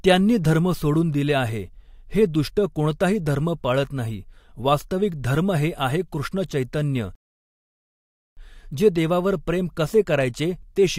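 At 7.15 s, after "हे आहे कृष्ण चैतन्य", a rebuffering stall cuts the speech to silence. The player ran dry. Speech resumes unchanged at 8.37 s, adding 1.2 s.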